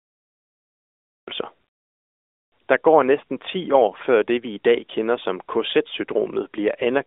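From 0 to 1.28 s the clip holds only silence, then the speech enters abruptly at 1.28 s: a cut-off start, where capture began late and caught the sound mid-flow. There is no attack or fade-in, and a waveform shows a flat line jumping straight to speech already under way, with a vertical edge on the spectrogram. The speech passes through an AMR narrowband mobile codec, band-limited to roughly 300 Hz to 3.6 kHz, with only light coding damage.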